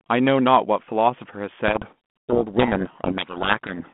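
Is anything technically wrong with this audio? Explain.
Yes. From 1.68 s to 3.89 s there is a codec payload misread. The G.726 decoder unpacks each code word with its bits in the wrong order, so valid-looking values decode wrongly. The speech, otherwise a narrow 150 Hz to 3.4 kHz telephone band, becomes buried in harsh distortion.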